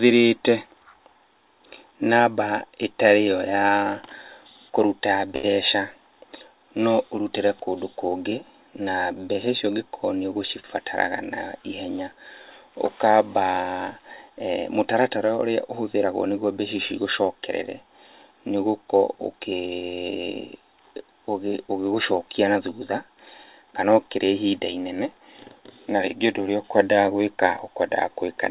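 At 5.36 s a short stall from a late packet holds the sound for 74 ms, until 5.45 s. The jitter buffer ran dry, so the receiver stretched the last bit of sound, then picked up exactly where it stopped. Unlike a lost-packet gap, nothing is skipped. The sound is only held too long, and the playout runs 74 ms later from then on.

From 18.97 s to 19.76 s comes a jitter buffer speed-up, as the receiver works off an extra backlog. It cuts out short slices of one or a few pitch periods in quick succession, removing about 70 ms, so the sound runs at 109% speed and feels briefly hurried. What separates this from resampling or a tape-speed change is that the pitch stays put. Only the timing tightens. Throughout, the band stops at 4 kHz, which fits a G.711 mu-law call path at 64 kbps.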